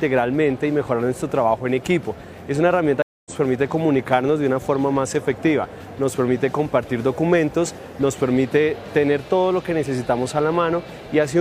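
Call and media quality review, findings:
Stream reconnect, 3.02–3.32 s. Audio cuts to silence for 233 ms, then resumes about 0.2 s further along, so a short stretch is skipped. Probable component: network transport and player. The connection dropped and a fresh decoder started mid-stream. Waveform: flat silent gap, with audio fading back in after it. Spectrogram: blank vertical band across all frequencies, with content not continuing across the gap.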